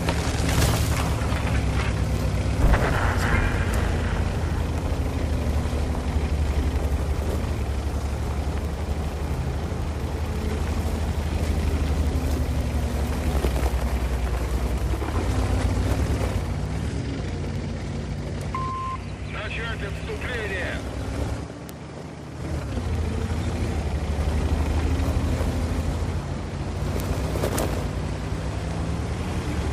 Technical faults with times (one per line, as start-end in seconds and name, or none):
0.10-29.70 word clock ticks